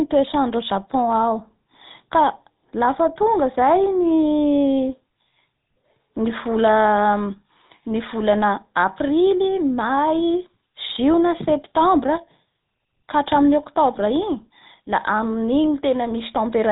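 The speech has been carried end to end through the GSM full-rate codec, the original mobile-phone coder, at what sounds like its 13 kbps rate. That codec models the vocal tract as a filter and excites it with a coarse, regularly spaced pulse train, and it discards everything above 4 kHz. Across the whole clip this leaves the speech band-limited and muffled, with a plainly audible buzzy, gravelly roughness laid over it.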